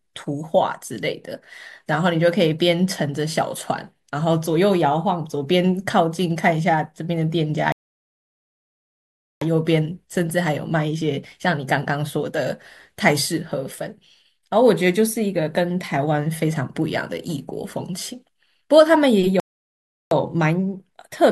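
At 7.72 s the speech drops to silence until 9.42 s, then picks up exactly where it stopped. A second gap runs from 19.40 to 20.11 s. Both are rebuffering stalls. The player ran out of downloaded audio and waited. Nothing is lost, but 1.69 s and 0.71 s of silence are added.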